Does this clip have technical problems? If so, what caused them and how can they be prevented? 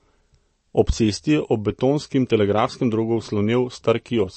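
Yes. Throughout the speech the treble stops sharply at about 8.3 kHz, and what remains below has a plainly audible watery, swirling quality, with s sounds chirping metallically and attacks smeared. The likely cause is MP3 compression at a low bitrate, consistent with around 35 kbps, where the encoder trims the top band and drops weak frequency lines that flicker between frames. A simple low-pass filter would dull the sound without the swirl. Encoding at a higher bitrate or in a lossless format prevents it.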